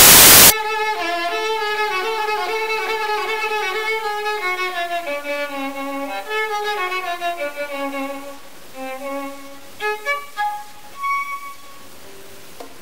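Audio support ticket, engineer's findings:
Samples built from the wrong bytes, 0.0–0.5 s. Broadband noise replacing the sound. Probable component: the sample reader, assembling bytes offset, swapped or misaligned, so fast-changing low bits dominate. Spectrogram: energy smeared across the whole band; waveform: dense, noise-like fill.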